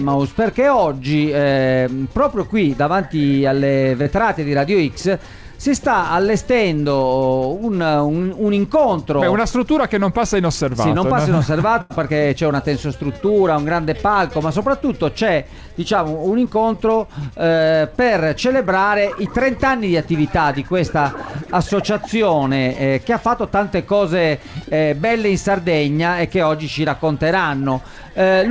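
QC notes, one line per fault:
4.02–4.07 s, short concealed packet loss: about 40 ms of audio arrived too late to be played. The receiver covered roughly 33 ms of it by extending the sound just before the gap, then blended back into the real signal. The result is a quick smear or wobble rather than an audible hole. Unlike a burst loss, there is no held tone or noticeable fade, and the sound picks up almost exactly where it broke off.
11.81–11.92 s, burst of packet loss: about 80 ms went missing in one run. The receiver stretched the last sound for about 84 ms while turning it down, so the tail lingers as a held, decaying tone or hiss within the G.722 call band, which stops at 8 kHz. The audio then resumes further on, and the stretch in between is simply gone. That audible fade and the skip forward set it apart from the brief smear at 4.02 s.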